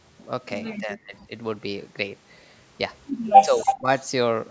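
From 0.8 to 1.31 s the speech is pushed down almost to silence in pieces, around 0.4 s in all. This is speech suppressed in double talk, likely from an echo canceller ducking the talker while the far side spoke. Unlike echo leak, nothing is added; the voice simply drops out. A milder dip of about 15 dB returns from 3.38 to 3.89 s.

Inside that dip, from 3.59 to 3.75 s, an echo leak lets through a short scrap of the voice, repeated 285 ms late and only about 5 dB below it, likely residual loudspeaker echo. The delayed copy is what sets it apart from the suppression around it.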